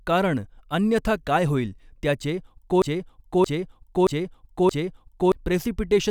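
After "अन्यथा काय होईल त्याचे", from 2.82 to 5.32 s, a 0.62 s snippet repeats four times back to back. This broken-record loop likely comes from a stalled stream resending its last fragment.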